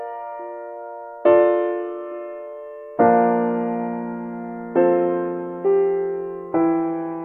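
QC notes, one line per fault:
Nothing to flag on this music clip, no faults heard anywhere in it.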